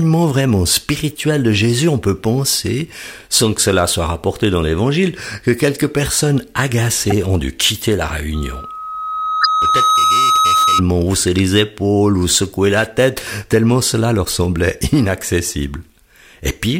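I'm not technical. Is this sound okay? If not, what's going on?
No. Two separate problems can be heard in this speech recording.

First, corrupt frames were decoded. The recording is stored in small compressed chunks, and a few of those chunks were damaged. The player played them anyway, so for a split second the sound lands at the wrong pitches. You hear brief chirps or noisy blips at 7.07 to 7.12 s, 9.41 to 9.46 s, 12.84 to 12.87 s and 14.24 to 14.34 s. The one at 9.4 s is the loudest. The last two are quieter, and the final one lasts a little longer.

Second, there is loudspeaker feedback squeal. A microphone was picking up the speaker it was feeding, and the sound went round that loop, growing louder each time at one particular pitch. From 8.34 s a steady 1.3 kHz tone, a high whistle, swells over about a second and a half until it is louder than the speech. It continues until 10.83 s.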